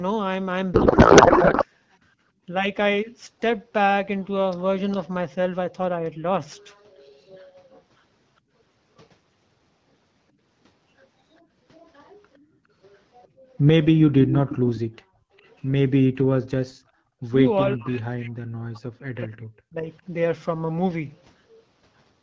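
Codec payload misread, 0.74 to 1.66 s: for almost a second the speech turns into garbled noise and warble that barely tracks the talker. The decoder is parsing AMR frames with its fields shifted out of place. The sound fits octet-aligned packets being read as bandwidth-efficient ones, so every frame decodes into plausible but wrong parameters. Once the packing agrees again, the AMR-WB speech returns at its clear 12.65 kbit/s quality.

Echo leak, 6.70 to 7.82 s, 11.74 to 13.28 s and 14.49 to 15.51 s: a copy of the speech trails the original by 409 ms. It is very low in the first two stretches, around 30 dB or more down. In the third it is far more audible, only about 15 dB below. The likely cause is a far-end loudspeaker whose echo canceller let part of the microphone pickup through and sent it back down the line.

Background gated by the echo canceller, 8.41 to 8.52 s, 12.39 to 13.46 s and 14.85 to 17.23 s: the room sound dips suddenly and then comes back. 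The microphone is being pulled down hard while the loudspeaker plays. The first dip is a brief notch of about 17 dB. The second is about 16 dB and covers roughly half a second in total. The third reaches about 37 dB, with most of a second gated across that span.

Speech suppressed in double talk, 17.76 to 19.90 s: the talker's voice sinks for about two seconds in all, at worst dropping by something like 40 dB. The likely cause is both sides speaking at once. The echo canceller could not tell the near talker apart from the loudspeaker echo, so it attenuated everything until the overlap ended.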